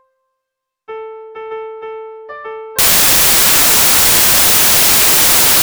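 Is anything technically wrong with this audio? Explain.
Yes. From 2.79 s to the end, the samples are built from the wrong bytes. The reader combines each sample's bytes incorrectly, so the rapidly changing low bits become the large part of each value. The result is loud, harsh broadband noise, close to white on the loud passages.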